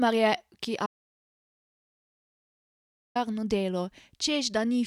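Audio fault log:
0.86–3.16 s, audio dropout to silence: speech cuts off mid-flow into 2.29 s of silence with no room tone, likely from a lost input link.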